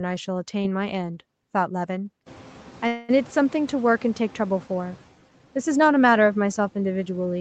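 From 2.26 s the noise suppressor is caught catching up as the room noise jumps by about 21 dB around 2.5 s. Its noise estimate lags, so the noise passes with little reduction at first, then sinks by about 6 dB as the estimate adapts over roughly 2.5 s, settling by 4.97 s.

From 2.87 to 3.11 s a call audio freeze occurs: the sound is held and extended as a fading continuation for 213 ms, never dropping to silence. The likely cause is delayed packets draining the jitter buffer. The audio then resumes where it stopped, nothing lost but 213 ms later.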